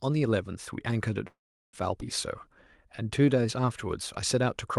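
A call audio freeze at 1.27 to 1.75 s inserts a 0.46 s gap, with a brief fading tail and then 0.37 s of silence, likely from delayed packets emptying the jitter buffer. A skip ahead at 2.01 s drops roughly a fifth of a second of speech, joining the two sides almost directly. A jitter buffer slow-down from 2.24 to 3.85 s repeats pitch periods to rebuild reserve, adding 168 ms so speech runs at 90% speed, drawn out at unchanged pitch.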